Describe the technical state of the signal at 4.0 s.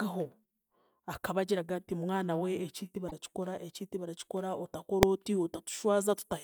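At 4.0 s the signal is intact, with no dropout, distortion or other fault audible at that moment.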